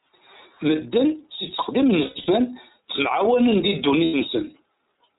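The whole recording passes through the iLBC codec, which codes each frame independently and cuts everything above 4 kHz. The speech is band-limited, slightly rough and synthetic, and the coding damage is plainly audible. The character fits iLBC's 13.33 kbps mode with 30 ms frames.

Lost iLBC frames occur after "si tteqdim n", between 2.04 and 2.29 s. Losses scattered across about 240 ms, with the longest gap around a tenth of a second, are filled by a repeated pitch cycle mixed with noise. This gives a held, buzzy vowel. A second loss from 4.05 to 4.15 s does the same for 90 ms, and the voice recovers almost at once.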